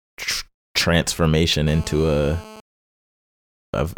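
GSM phone buzz, 1.67 to 2.60 s: a hard, raspy 217 Hz buzz, rich in harmonics and about 19 dB below the speech. A nearby 2G phone on a call transmits 217 bursts per second, which the audio circuitry rectifies, keeping the buzz steady throughout.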